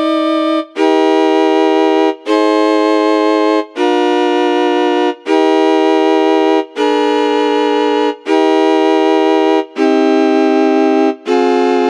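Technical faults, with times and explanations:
Nothing here needs flagging; the audio runs along steadily with no technical trouble to report.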